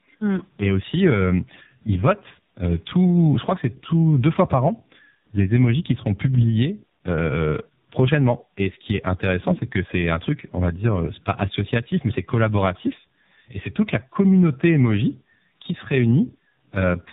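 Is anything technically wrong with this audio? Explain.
Yes. Throughout the whole clip the speech sounds rough, muffled and warbly, with nothing above about 3.8 kHz. This is tandem speech coding. The call passed through two low-rate speech codecs in a row, decoded and re-encoded at each hand-off, with a plain telephone-band link between them. The character fits iLBC followed by AMR-NB at a low rate. The second coder had to model speech the first had already smeared, so their artefacts stacked instead of one masking the other.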